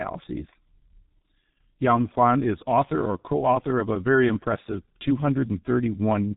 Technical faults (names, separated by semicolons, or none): G.723.1 codec